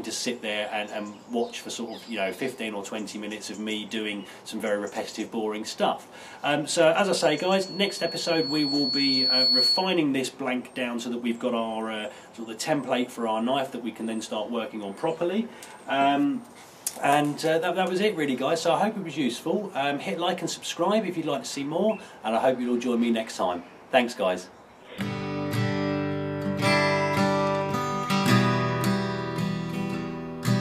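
From 7.04 to 10.03 s a loudspeaker feedback squeal appears: a single 4.4 kHz tone swelling over about two seconds to roughly 5 dB above the surrounding sound. A microphone was re-amplifying its own loudspeaker, with loop gain above unity at that frequency.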